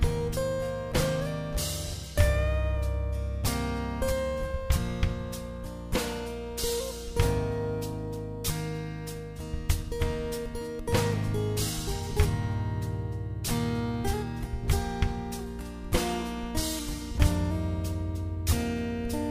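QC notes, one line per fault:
Throughout: crude rate conversion. Samples were repeated without filtering, likely converting 44.1 kHz to 48 kHz, leaving an inharmonic gritty fizz roughly 25 dB below the sound.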